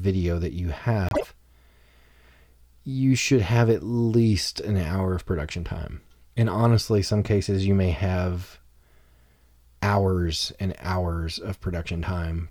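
Right after "that you", from about 1.09 to 1.25 s, there's a frames-out-of-order glitch: two neighbouring blocks of around 52 ms, which fits two-frame blocks, got decoded in swapped order. You hear a brief garbled flutter, and no time goes missing.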